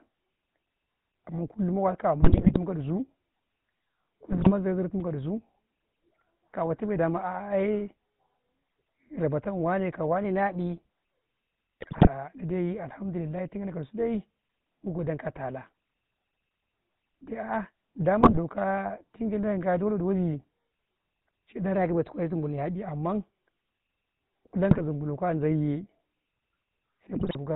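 The whole clip runs through the GSM full-rate codec, which fits a 13 kbps stream: nothing above 4 kHz, and a plainly audible buzzy, gravelly roughness from the pulse-driven excitation. GSM bit errors hit at 2.22 to 2.58, 4.32 to 4.52, 11.81 to 12.08, 18.21 to 18.38, 24.71 to 24.82 and 27.15 to 27.37 s, where corrupted filter, pitch or gain values turn the speech into brief squawks, pops and gargling. From 21.75 to 22.74 s the speech runs about 6% fast and roughly a semitone sharp, then snaps back, likely a drift correction step in clock-matching software.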